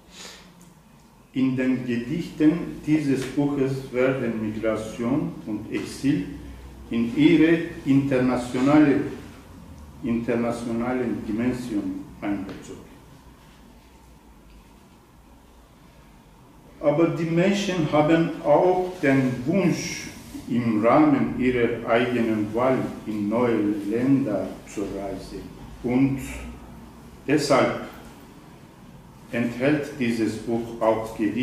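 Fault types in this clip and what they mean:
Nothing stood out on listening that would call for a fault type to be listed.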